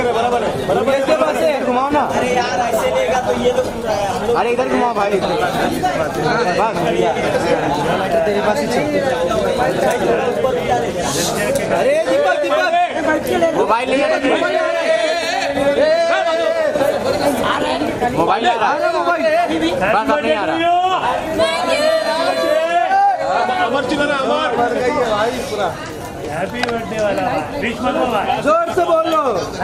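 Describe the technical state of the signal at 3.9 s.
At 3.9 s the audio is still in the adaptive stream's low-bitrate start, which runs from 0.0 to 6.0 s. The player begins on a cheap version to start fast. Treble is thin or synthetic and codec artefacts are strong, which fits about 24 kbit/s. At 6.0 s quality jumps cleanly, with no gap.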